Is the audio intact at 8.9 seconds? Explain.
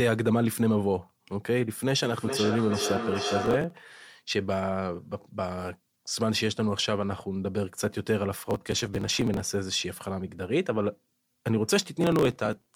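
No. At 8.9 seconds you're right in the middle of a burst of processor overload crackle that runs from about 8.42 to 9.40 s. The processor couldn't keep up, so it missed deadline after deadline, around seventy of them, on buffers that sound to be roughly a millisecond and a half long. Each miss simply skips that slice, leaving a hard-edged gap, and all those tiny dropouts pile into a gritty, tearing crackle over the speech until the load eases.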